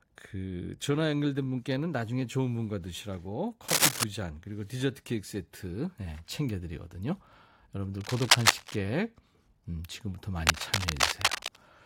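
Speech clip with cable scratch noise in three bursts, at 3.68–4.04 s, 8.01–8.78 s and 10.42–11.58 s. Each is dense, ragged rustling sitting around 5 dB above the speech, likely from a worn cable or connector whose contact resistance fluctuated as it moved.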